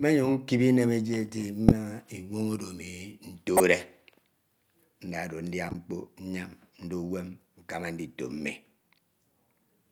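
At 1.69–1.72 s, 3.57–3.60 s and 5.69–5.75 s, a corrupt frame was decoded: damaged bits were played anyway, so each burst of a few frames gives a chirp, squeak, blip or burst of noise, the first two loud at around -5 dBFS, the last quieter. Spectrograms show short vertical smears of misplaced energy; waveforms show brief spikes.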